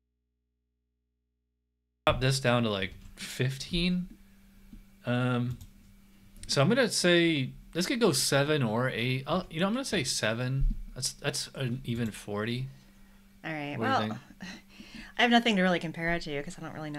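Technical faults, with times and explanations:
0.00–2.07 s, audio dropout to a faint residue. The clip opens with the sound already missing. Only mains hum remains, roughly 50 dB below the signal. The path likely stayed live after an upstream break. At 2.07 s the sound returns abruptly, not fading in.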